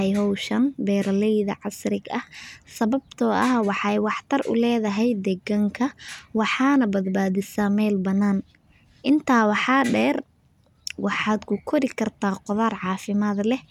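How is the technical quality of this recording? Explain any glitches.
No technical faults are audible anywhere in this recording.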